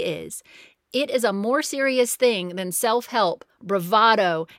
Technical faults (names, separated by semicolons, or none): none